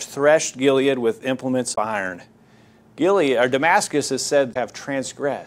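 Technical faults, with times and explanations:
1.72–1.78 s, just after "with implements", and 4.50–4.56 s: damaged data in a compressed stream. Corrupt bytes make the decoder lose frame sync and search for the next header, so the speech breaks into a brief chirp or blip lasting about 60 ms.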